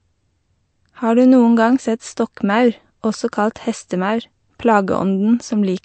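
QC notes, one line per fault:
Throughout, low-bitrate audio saved at a high bitrate: the speech has nothing above 8.4 kHz despite the large file, likely a low-bitrate MP3 pass later re-encoded at a high bitrate.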